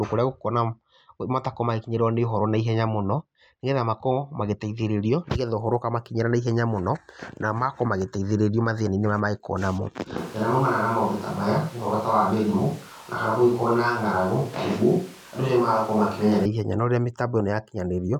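From 10.18 s to 16.45 s the speech suddenly turns hollow and roomy. Bass thins and room noise rises to about 25 dB below it, while the level barely changes. This is likely a switch to a distant microphone. A spectrogram shows weakened lows and reverb smearing between syllables. The switch comes abruptly just before "ihenya no", and close sound returns abruptly at 16.45 s.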